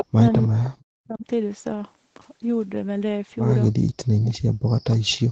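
From 0.00 to 0.06 s and again from 0.42 to 0.70 s there is an echo leak: a copy of the speech arrives 319 ms late. It is first nearly as loud as the speech, then much fainter. The likely cause is an echo canceller letting loudspeaker residue through. Between 0.11 and 1.25 s, and from 3.73 s to the end, the speech drops out in pieces by up to about 40 dB. This is likely speech suppressed in double talk, with the canceller turning the talker down along with the echo.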